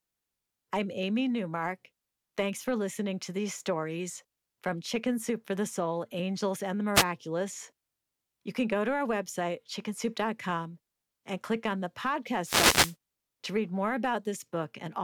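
At 6.94 to 7.04 s, and again for about half a second from 12.42 to 12.96 s, a wireless microphone noise hit breaks into the speech as a brief swish of static. The analogue FM radio link fades as reflected signals cancel, and the receiver's hiss rises over the voice. Unlike a digital dropout, the sound never cuts to silence. A rushing noise washes over it and then clears.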